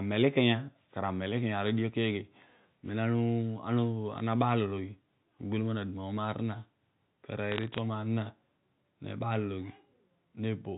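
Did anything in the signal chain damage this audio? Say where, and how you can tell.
Yes. Bit errors on the digital phone line damaged the transmission stage between 7.52 and 7.78 s. Sharp ticks crackle over otherwise unchanged speech there. Flipped bits in the G.711 stream corrupt single samples, and the rate sounds low, a few per thousand.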